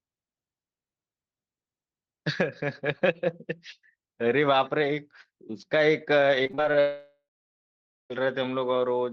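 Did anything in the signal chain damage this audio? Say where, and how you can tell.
Yes, at the network stage. From 6.43 to 6.75 s the speech turns choppy and robotic. This is repeated packet loss: six short gaps, up to 30 ms, each patched by stretching earlier sound.

From 6.80 to 8.12 s the speech stops. A fading buzz gives way to near silence, then audio resumes with about 1.3 s missing. This is likely a long network dropout.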